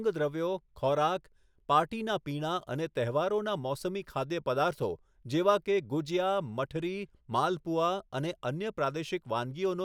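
No technical faults can be heard in this speech recording. There is nothing here to place in time or to trace back to a cause.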